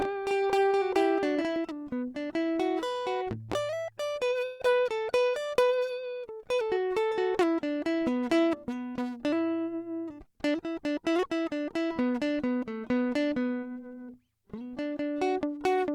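Music, with two technical faults. From the start until 1.56 s a doubled audio track is audible: a second full-band copy at roughly the same level trails the original by around 0.4 s, with no decay or room colour, and cuts off abruptly. The likely cause is the signal being captured twice, once through a slower path. At 4.45 to 4.61 s a burst of packet loss replaces 140 ms of audio with a concealment fill that prolongs the last sound while fading it down, and the music resumes with that 140 ms missing.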